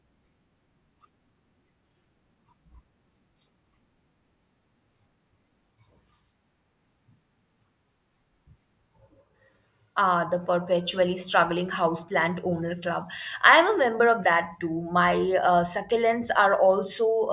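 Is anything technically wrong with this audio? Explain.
No, nothing technically wrong turns up anywhere in this speech recording.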